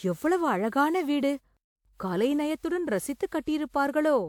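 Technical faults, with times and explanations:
Throughout, generation loss: the speech has a swirly, smeared, hollow quality, with consonant attacks blurred, despite the spectrum still reaching about 20.1 kHz. That wide bandwidth means the damage isn't a simple low bitrate. It likely comes from the audio being decoded and re-encoded roughly seven times, which fits a WMA 1 chain at about 128 kbit/s. Each pass quantises on a shifted frame grid, so noise piles up.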